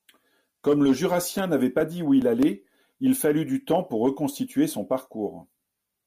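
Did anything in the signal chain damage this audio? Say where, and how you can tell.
Yes: CD scratch ticks between 1.39 and 2.63 s, at the playback stage. Seven brief ticks, each only a few milliseconds, recur at roughly six per second just before "il a fallu du", as a scratch defeats error correction on each disc turn and the player patches the lost samples.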